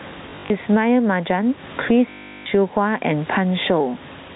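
Throughout the speech the level swings by around 15 dB, leaving loud and quiet passages squashed toward one level. This is gain pumping, likely from input gain set far too high, with a fast limiter or compressor hauling it down on each loud peak and letting it spring back in the gaps.

From 0.3 to 0.5 s the sound stutters in short bursts: 120 ms of audio is missing, scattered across those 200 ms in runs no longer than 40 ms, which fits 20 ms packets. From 2.1 to 2.46 s comes a single unbroken 360 ms stretch with a steady robotic buzz near 50 Hz. Both are packet loss with the last packet repeated: the receiver keeps replaying the final packet it got, and the joins seldom line up with the pitch cycle.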